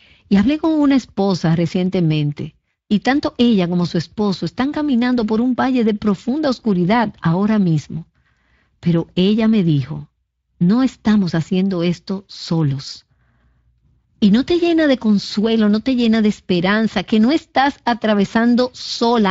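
The Speex codec damage runs through the whole speech clip. It is plainly audible. This CELP coder has too few bits for the excitation signal, so the voice sounds noisy and hoarse. The level of damage fits a bitrate of around 20 kbps.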